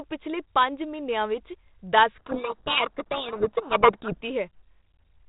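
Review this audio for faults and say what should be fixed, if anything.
Codec payload misread, 2.14 to 4.18 s: the G.726 code words are unpacked with their bit order reversed, so the decoded difference values are wrong. That buries the speech in harsh distortion over the band-limited audio, whose light telephone-band coding fits 32 kbit/s G.726. To prevent it, make sender and receiver negotiate and use the same G.726 packing convention, such as the RTP or AAL2 bit order, from call setup onward.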